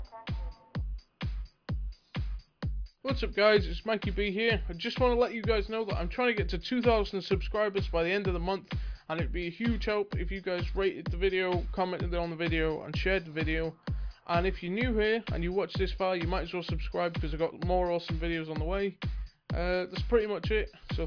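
No technical faults can be heard anywhere in this clip.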